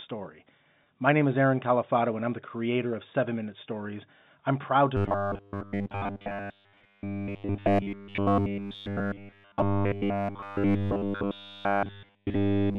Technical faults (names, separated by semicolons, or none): packet loss with pitch repetition; robotic sound from repeated short buffers